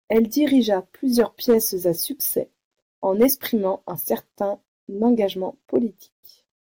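Speech with hard clipping on its loudest peaks, where the level exceeds what the converter or number format can pass and the tops are cut flat. Brief crackle sounds at 0.12–0.19 s, 1.19–1.57 s, 3.21–3.25 s, 5.05–5.07 s and 5.76 s, with peaks up to about 5 dB beyond full scale.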